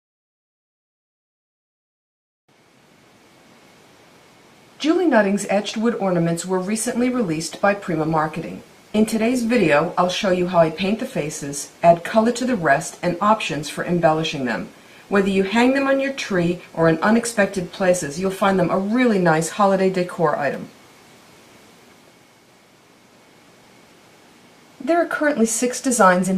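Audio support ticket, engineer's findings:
Sudden drop in quality 6.8 s to 18.8 s, more codec artefacts, no gap either side, then abrupt recovery. Adaptive stream at a lower bitrate: the player switched to a lower rendition for 12 s, which fits a step from roughly 64 to 24 kbit/s Opus.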